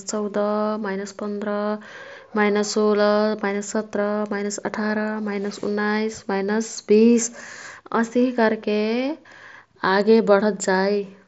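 At 3.17 s, just before "माइनस सत्रा माइनस अठारा", there is concealed Bluetooth headset packet loss. A gap of about 7.5 ms points to one lost packet from the headset. The receiver filled it by repeating recent waveform, so the glitch is nearly hidden beneath the mSBC wideband speech.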